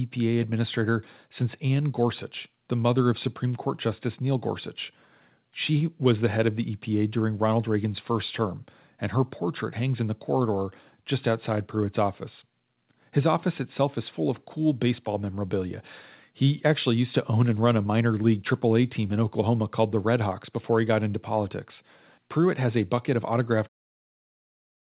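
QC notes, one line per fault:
No faults found in this speech; the deliberate fade-out from roughly 23.5 s to 23.69 s is smooth, and the band limit at 4 kHz fits a G.711 mu-law call path at 64 kbps.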